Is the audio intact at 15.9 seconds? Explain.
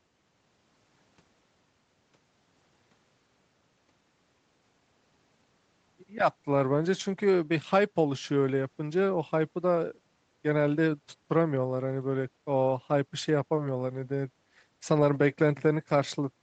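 Yes, the speech at 15.9 seconds is intact, with nothing there beyond the ordinary band limit near 8 kHz that comes with a normal call path.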